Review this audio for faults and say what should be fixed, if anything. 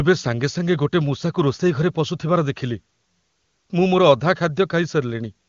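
Nothing here needs fixing; the speech comes across clear and intelligible, as you'd expect from an AMR-WB call running at a high rate.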